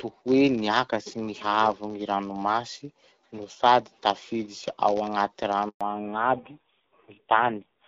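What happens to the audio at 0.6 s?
A block size mismatch (padded) is present at 0.6 s, as it is for the entire clip. One processing stage hands over blocks shorter than the next stage expects, and the remainder of each block is zero-filled. That short silence recurs in every block, producing a buzz at 91.5 Hz, the block rate. The inserted gaps also stretch the speech, which runs at 0.996 times normal speed while keeping roughly its normal pitch.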